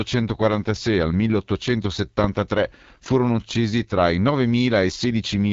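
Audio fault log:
Throughout: AMR wideband (HD Voice) codec. The speech is rough and raspy, as the low-rate model struggles to rebuild the vocal tract pulses, which fits roughly 8.85 kbit/s. Nothing sounds above about 7.3 kHz, and the top band is a noise fill rather than a plain narrowband cutoff.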